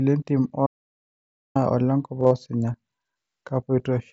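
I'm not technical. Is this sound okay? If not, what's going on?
No. From 0.67 to 1.55 s the sound cuts out completely for almost nine-tenths of a second, with dead silence and no background left at all. This is an audio dropout to silence, most likely the input briefly disconnecting while recording carried on, so that stretch is simply lost.

Around 2.20 to 2.31 s there is a short buzzy, held-tone patch and a slight wobble as normal sound resumes. This is concealed Bluetooth headset packet loss. Bits of sound travelling over the wideband mSBC headset link went missing, the longest gap about 45 ms, and the phone patched them by repeating the last moment of sound.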